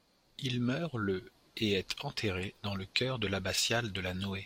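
Speech, with a corrupt frame decoded from 3.55 to 3.62 s, just after "dans le chœur de". Flipped bits in the compressed data were played anyway, putting energy at wrong frequencies as a brief burst peaking around -20 dBFS, a length consistent with roughly three damaged frames.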